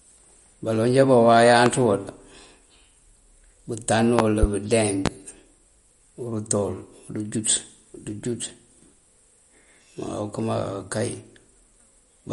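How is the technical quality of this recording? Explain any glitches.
The quality is fairly rough: the speech carries plainly audible compression damage throughout, plus a few sharp pops.

The MP3 compression is audible for the whole clip. Nothing comes through above 11.2 kHz, and the top end has a watery, swirly quality where weak frequency detail drops in and out between frames. That's likely from an encoder starved of bits, which fits a low bitrate of around 48 kbps.

The loud pops come at 1.66 to 1.70 s, as a double pop between 4.19 and 4.46 s, and at 5.06 to 5.09 s. Each jumps roughly 20 dB above the speech, which carries on underneath. They're likely voltage spikes from a plug, switch, static or driver glitch.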